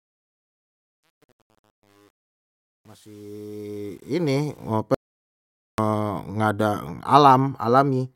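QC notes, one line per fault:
0.0–4.7 s, truncation distortion on a fade: the fade-in's quietest stretch, worst up to 4.1 s, sounds gritty, consistent with a gain stage keeping only 9 bits without dither. The waveform shows coarse square steps, and the spectrogram shows broadband hash instead of clean harmonics.
4.94–5.78 s, audio dropout to silence: about 0.84 s vanishes into silence right before "nggak ada", with no room tone, likely from a lost input link or stray mute. The waveform is a flat line, and the spectrogram is a fully black vertical band.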